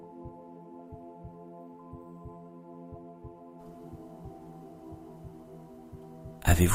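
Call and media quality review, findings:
No audible faults found.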